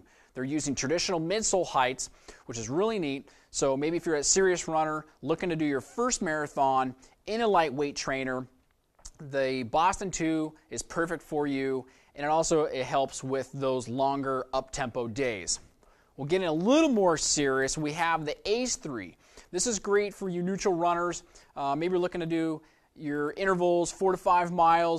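No technical faults can be heard anywhere in it.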